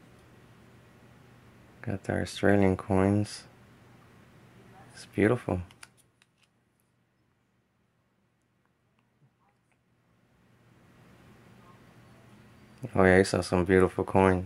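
No technical faults are audible anywhere in this audio.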